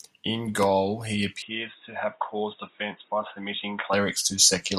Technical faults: input switched to a poorer device

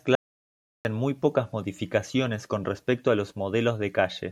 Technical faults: audio dropout to silence

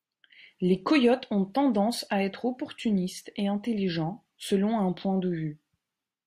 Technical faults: none

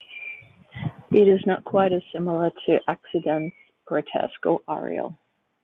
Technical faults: call bitrate drop

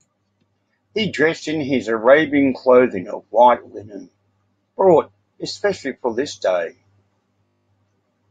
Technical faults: system hang loop

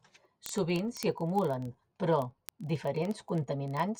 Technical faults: word clock ticks

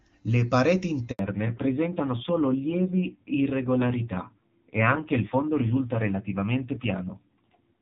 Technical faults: handover gap; fallback to narrowband

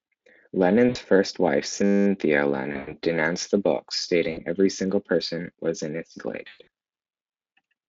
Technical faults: VoIP packet loss concealed by the speech codec; system hang loop

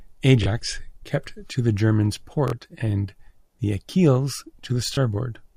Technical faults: Bluetooth stutter

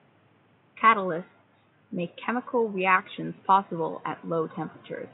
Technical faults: none

